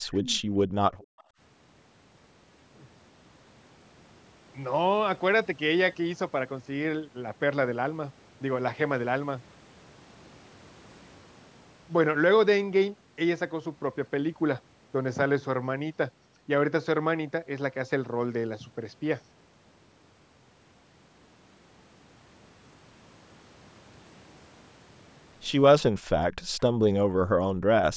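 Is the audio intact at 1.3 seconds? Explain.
No. At 1.3 seconds the background is gated by the echo canceller, from 0.97 to 1.39 s. The canceller pulls the microphone down by about 39 dB, so the room sound drops out. Just before, from 1.0 to 1.24 s, a faint echo leak is audible. A delayed copy arrives 276 ms late, about 35 dB below the speech, likely from incomplete echo cancellation.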